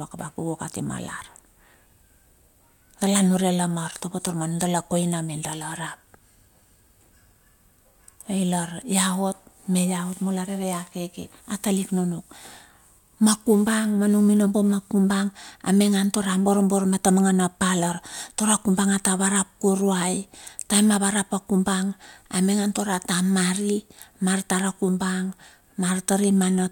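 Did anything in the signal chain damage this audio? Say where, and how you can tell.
No, nothing along the chain left a mark on this speech that I can hear, so there's no stage to point at.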